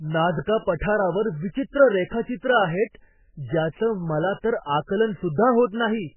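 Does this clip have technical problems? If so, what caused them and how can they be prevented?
Yes. A faint, high whistle sits under the speech for the whole clip. Its pitch moves between about 11.0 and 11.2 kHz, roughly 35 dB below the speech. This is a switching supply whistle. A switch-mode power supply is running in a burst mode, or beating with another one, at a rate low enough to land in the audible band. It leaks into the audio path as a thin tone. To prevent it, power the recording gear from a clean linear supply or a better-filtered adapter.

The speech also sounds watery and muffled, with heavy smearing. Nothing is heard above about 3 kHz. That points to MP3 compression at a very low bitrate, likely around 8 kbps. With so few bits, the encoder cuts all treble at a fixed point. It drops weak frequency lines, and they flicker on and off from frame to frame. That makes the swirling texture and blurred consonant attacks. 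To prevent it, record or deliver at a much higher bitrate, or in an uncompressed format.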